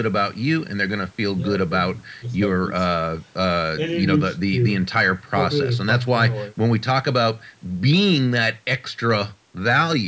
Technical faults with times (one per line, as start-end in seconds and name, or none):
none